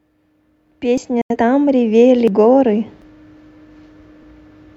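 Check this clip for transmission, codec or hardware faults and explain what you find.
The speech has two kinds of fault: four sudden skips and one short muted gap.

At 0.98, 2.28, 3.02 and 4.23 s the sound jumps ahead, losing about 50, 100, 150 and 100 ms. This is likely a dropped buffer (overrun), where samples were overwritten before being collected. The waveform shows an abrupt seam with no gap.

From 1.21 to 1.36 s a digital broadcast dropout mutes the sound after a 3 ms fade. About 85 ms of audio is lost, which fits two failed frames. Both the waveform and the spectrogram show a flat blank band.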